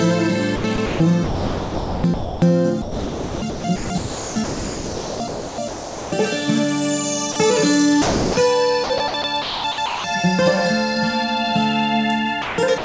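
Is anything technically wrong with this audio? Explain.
Yes. The sender's voice activity detection most likely cut the sound out several times, and the receiving side filled the gaps with comfort noise.

Sound chopped by the voice detector occurs from 0.56 to 2.42 s, 2.82 to 6.12 s, 8.84 to 10.04 s and 12.42 to 12.84 s. In each stretch the detector switched between sending and not sending several times. It treated quiet parts of the signal as background, so the receiver substituted synthetic noise for much of each span: about 1.32 s, 2.76 s, 0.62 s and 0.22 s respectively. The result is sound with repeated holes in it.

Sound dropped by the voice detector occurs from 7.32 to 7.36 s and 8.02 to 8.36 s. In both places the detector judged the incoming sound to be background and stopped transmitting. Comfort noise replaced the audio for 40 ms and then 340 ms. The sound gives way to steady noise or near silence and returns once the detector triggers again. 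The first dropout is just a brief blip, while the second is longer.

The call path itself is band-limited, with nothing above 8 kHz, which fits a G.722 codec.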